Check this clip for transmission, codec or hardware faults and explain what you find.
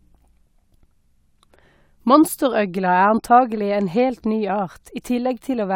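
Nothing in the speech stood out as a fault on listening.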